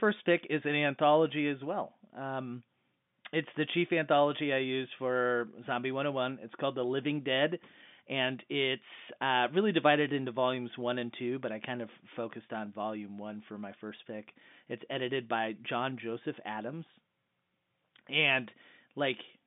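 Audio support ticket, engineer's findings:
Findings: no fault found on this speech clip, which carries the narrow band of an ordinary G.711 telephone line.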